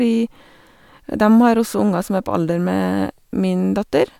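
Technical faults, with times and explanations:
Nothing to flag here; the speech comes through without any technical faults to point out.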